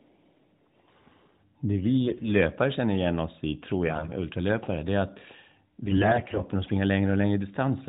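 From 2.06 to 2.29 s and again from 5.86 to 6.44 s the speech turns hoarse and gargly: AMR bit errors, with roughly one bit in ten flipped, so excitation pulses and fine gain and spectrum values land wrong. Unlike a dropout, pitch and loudness survive.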